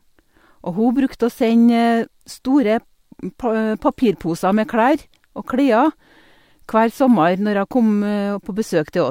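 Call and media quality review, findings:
No audible faults found; no action required.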